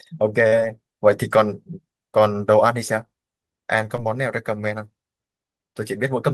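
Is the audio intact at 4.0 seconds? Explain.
No. Short concealed packet loss sits at 3.96 to 4.00 s, right at that moment. About 20 ms of the call, which fits one lost packet, never reached the decoder in time. The receiver covered the gap by extending the preceding sound for about 16 ms, carrying its pitch forward or synthesising shaped noise, then crossfading back into the real signal. The result is a brief smear or wobble, and a short consonant there may drop out.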